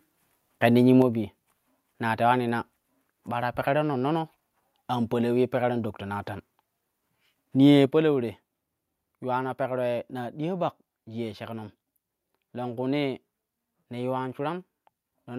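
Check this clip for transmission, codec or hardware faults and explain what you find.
The clip has one kind of fault, occurring twice. At 1.02 s and 7.86 s, the microphone volume stepped down. The level of the speech and background drops abruptly, by about 4 dB and then about 6 dB. The likely cause is call software cutting the input gain after judging it too loud.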